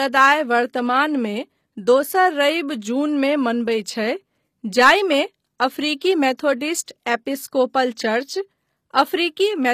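Throughout the speech, the smeared, swirly artefacts of heavy compression persist even though the band reaches about 19.8 kHz. This is likely low-bitrate audio saved at a high bitrate: a roughly 24 kbit/s HE-AAC encode re-saved as high-rate MP3, which cannot restore what was discarded.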